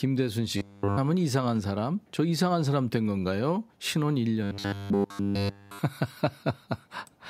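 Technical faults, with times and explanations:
0.57–0.98 s and 4.43–5.79 s: robotic sound from repeated short buffers. In both stretches the speech turns into a rigid, metallic buzz locked at 100 Hz that only loosely follows the syllables, and almost none of the real audio gets through. A steady 100 Hz tone fits a 10 ms block being replayed over and over, likely because fresh audio stopped arriving in time. Unlike a pitch-shift fault, this tone stays flat regardless of intonation.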